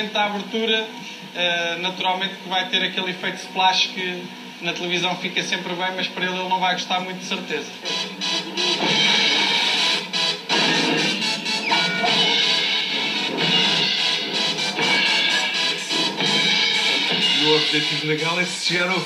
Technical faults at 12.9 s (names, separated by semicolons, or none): none